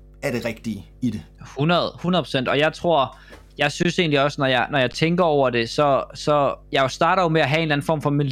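From the first moment to the end, a steady low tone at 50 Hz sits under the speech, roughly 25 dB below it. This is mains hum: a ground loop or a nearby transformer has let the power line leak into the signal path. Unlike broadband noise or hiss, it has a fixed pitch and never changes with what is being said. Unlike rumble or handling noise, it stays constant in level and frequency.

Two brief dropouts follow, from 3.83 to 3.85 s (20 ms) and at 4.93 s (15.4 ms). Each is an underrun with held sample: the output buffer ran dry, so the converter froze on its last value until data arrived again. The waveform goes flat, so the sound stops almost without a click, unlike a dropout to silence, which snaps to zero. Nothing is skipped, and playback resumes where it stopped, so each gap ends with only a soft edge.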